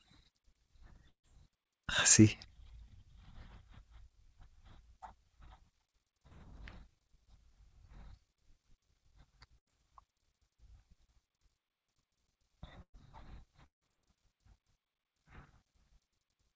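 Speech carried over a wideband call path whose band stops at 8 kHz, consistent with G.722 coding, with five gaps in the audio. At 1.08–1.26 s and again at 13.66–13.84 s the sound is held briefly as a fading buzz or hiss, then drops to silence for roughly 0.1 s and 0.13 s respectively, losing about 160 ms each time. This is most likely a long network dropout. At 6.27–6.34 s a short concealed packet loss smears about 40 ms into a brief wobble as the receiver extends the previous sound before blending back. Two bursts of packet loss follow. At 9.59–9.69 s about 80 ms is replaced by a decaying held sound. At 12.82–12.96 s about 120 ms goes missing, with the concealment fading into roughly 80 ms of silence before the speech resumes further along.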